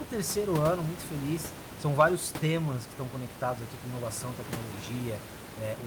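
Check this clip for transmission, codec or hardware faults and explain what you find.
No transmission, codec or hardware faults turn up in this clip.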